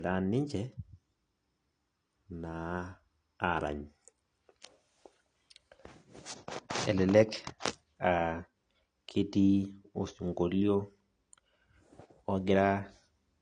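Throughout the speech, low-bitrate smearing persists. This is likely low-bitrate audio saved at a high bitrate, with earlier lossy damage kept in a larger MP3.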